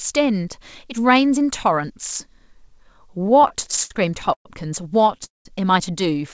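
Repeated stalls (stutter) run through this speech recording from 3.22 to 4.47 s: eleven short hitches, the longest 119 ms, stretch the sound as the receiver holds the last fragment each time late packets leave its jitter buffer empty, padding in about 288 ms, nearly a quarter of that span, while nothing is lost. A call audio freeze follows at 5.25 to 5.47 s: the sound hangs and fades to silence for about 170 ms of its 205 ms, then resumes where it left off, likely because packets were held up in transit and the buffer ran dry. Throughout, the band stops at 8 kHz, which fits a G.722 call path at 64 kbps.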